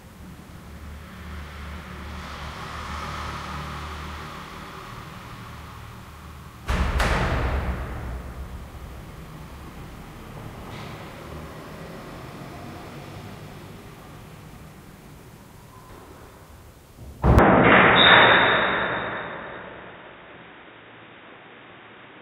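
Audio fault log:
17.39–22.22 s, input switched to a poorer device: the sound turns dull and boxy at once, with nothing above 3.8 kHz and new background noise about 30 dB down, likely from a narrower-band input. On a spectrogram the upper band ends abruptly; the waveform shows no gap or level step.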